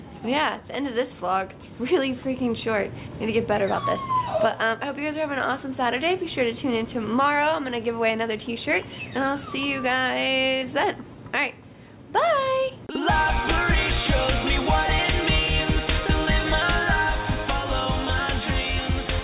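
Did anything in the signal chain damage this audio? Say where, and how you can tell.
Yes: short concealed packet loss at 10.58 to 10.64 s, in the network stage. About 40 ms of audio reached the decoder too late. The receiver patched it by extending the preceding sound, heard as a brief smear before the band-limited G.711 call audio resumes.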